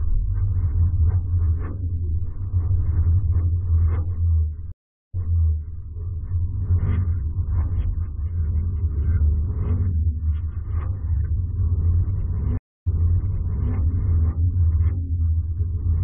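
At 4.72 s the sound cuts out for about 370 ms, then comes back 0.72 s earlier and repeats a stretch. At 12.57 s a 250 ms gap resumes 0.91 s back. Both are stream reconnects: the connection dropped and a fresh decoder restarted on a resent burst.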